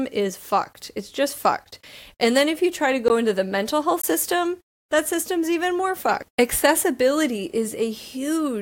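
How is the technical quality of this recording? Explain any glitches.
Two brief glitches interrupt the speech, both blocks of digital silence. At 3.08 s, after "if you try to", and from 4.02 to 4.04 s, after "into the mental health", the output drops to silence for about 17 ms and then 20 ms, probably because a buffer went unfilled. The sound cuts out and back with abrupt, unfaded edges, leaving each gap as a short hole in the speech.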